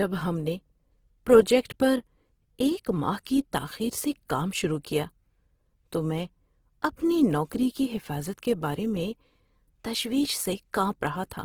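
Throughout, the speech likely went through Opus compression starved of bits, fitting about 16 kbps; noise-filled bands leave it plainly rough and grainy.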